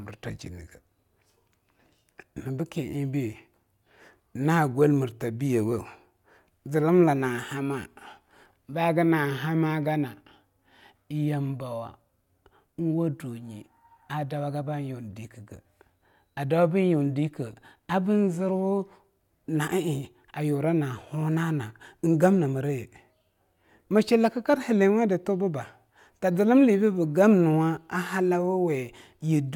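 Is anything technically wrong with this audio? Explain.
No, nothing technically wrong can be heard here.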